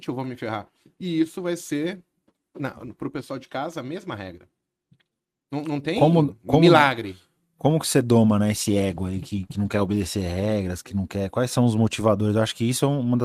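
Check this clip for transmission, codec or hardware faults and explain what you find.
One transmission fault is present, a call bitrate drop. From 8.58 to 11.59 s the encoder's bit budget falls, which fits a drop from 40 to 16 kbps, bottoming out for about 2 s. Coarser coding makes the speech rough and watery, and the loss of high frequencies muffles it. On a spectrogram the upper band empties and detail smears. The waveform looks less detailed until the rate recovers.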